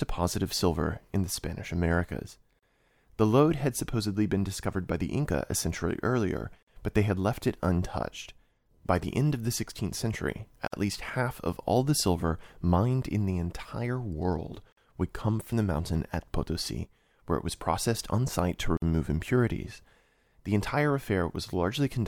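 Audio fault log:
2.59, 6.63, 10.68, 14.72 and 18.77 s: gap at a join of encoded pieces, every 4.0 s, gap 36 ms first, then 49 ms. Separately encoded segments were joined with encoder start delay and last-frame padding left in, so speech drops out, edges smeared, then resumes.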